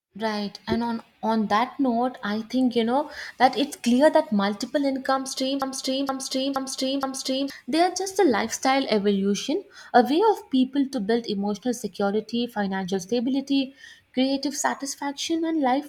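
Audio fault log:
5.62–7.50 s broken-record loop: playback likely stalled and kept resending its last 0.47 s fragment, so the speech repeats four times back to back and the audio that should follow is lost.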